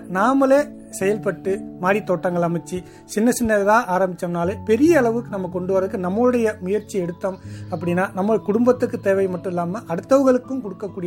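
Nothing stood out as a problem on listening.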